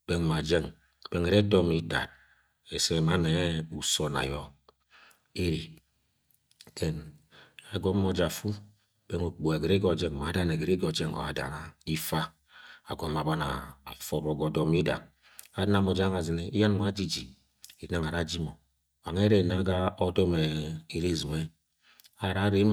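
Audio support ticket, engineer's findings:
Listened through the speech recording and nothing stood out that would point to a fault in the capture or playback chain.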